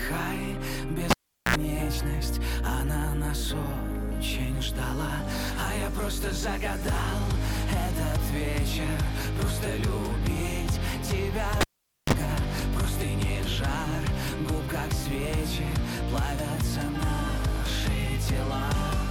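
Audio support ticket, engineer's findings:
Pop, near silence, short mains buzz, second pop: 1.10 to 1.56 s (405 ms dropout, 70 ms buzz at 60 Hz) and 11.61 to 12.13 s (473 ms dropout, 32 ms buzz at 50 Hz). Cable pulled and plugged in live: tip contacts first, ground after.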